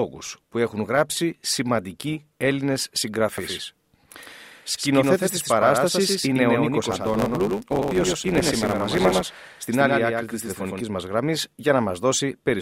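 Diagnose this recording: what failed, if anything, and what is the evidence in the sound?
From 3.38 to 10.81 s a doubled audio track is heard: a full-band copy of the speech about 5 dB quieter, roughly a tenth of a second late, starting and stopping abruptly. It has no decay or room colour, unlike echo, and is likely a second capture path or misaligned edit.

A block size mismatch (truncated) at the driver or buffer stage runs from 6.90 to 9.41 s. Each block's tail is discarded, giving a 100 Hz buzz, which fits 512-sample writes, and speech runs 1.07 times faster. Unlike resampling errors, timbre stays normal.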